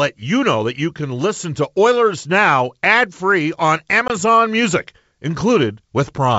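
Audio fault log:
4.08–4.11 s, packet loss on an ADPCM call: right after "ad free on" the speech drops into a hard-edged silent hole of about 20 ms, roughly two packets' worth, in the otherwise clean G.722 wideband stream. What separates this from a simple dropout is the recovery. G.722's adaptive predictor and step size lose track of the sender while the packets are missing, so the speech resumes with a brief disturbance and needs some tens of milliseconds to settle.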